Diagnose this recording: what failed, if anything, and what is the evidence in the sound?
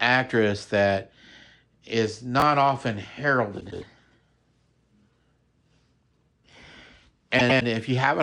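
Chunks out of order at the driver or buffer stage: from 2.40 to 2.42 s the speech is briefly jumbled. A 10 ms chunk was written one chunk late, so it plays after its successor. Nothing is lost, but the sequence is wrong.

Frames out of order at the codec or network stage: from 3.60 to 3.83 s and again from 7.39 to 7.62 s there is a garbled flutter. In each case two adjacent 104.5 ms blocks, which fits runs of about four frames, were decoded in swapped order. No time is lost.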